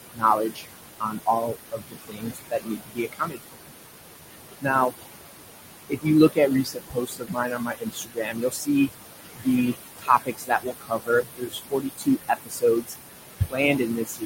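Noise suppressor artifacts run through the whole clip. Frame by frame, the suppressor pulls the room noise, which sits about 7 dB below the speech, down by about 20 dB. The noise sinks between the words and rises under them.

Speech cut by the noise suppressor occurs at 0.12–0.67 s, 1.0–3.71 s, 4.6–4.94 s, 5.89–8.9 s, 9.23–12.95 s and 13.39 s to the end. Here, soft speech that was mistaken for noise drops by about 19 to 22 dB, so consonants and quiet stretches sound swallowed, for roughly two seconds within each long span.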